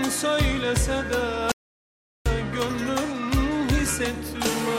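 At 1.52 s the sound cuts off abruptly and stays in total silence until 2.26 s, when it resumes mid-flow. The gap lasts about 0.74 s and holds silence with no room tone or background beneath it, and whatever was happening during it is simply missing. This is an audio dropout to silence, likely caused by the input being lost for a moment, through a disconnection, a link failure or a stray mute, while recording carried on writing silence.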